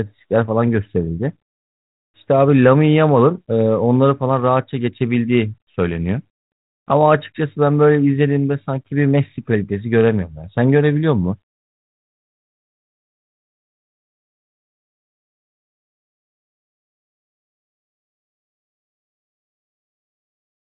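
No faults are audible in the speech; the G.726 ADPCM path at 32 kbit/s leaves it band-limited below 4 kHz with only the light coding noise expected at that rate.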